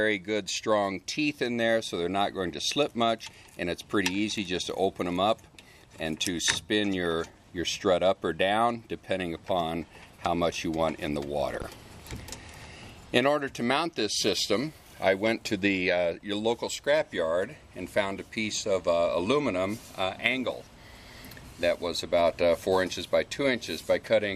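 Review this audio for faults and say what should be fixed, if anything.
There's one loud pop at 11.62 to 11.65 s, a single sharp hit peaking a few dB above the sound, which carries on underneath. It's likely a voltage spike from a plug, switch or static discharge. Keep connections seated and avoid switching gear mid-take.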